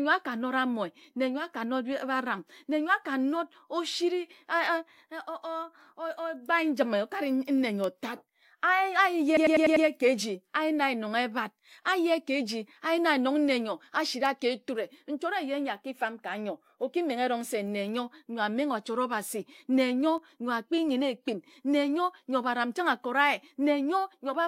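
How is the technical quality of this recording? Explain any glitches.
One glitch stands out. Repeated frames from 9.37 to 9.86 s: a 108.8 ms block replays five extra times, producing a rapid stutter and stretching the audio by about 0.49 s.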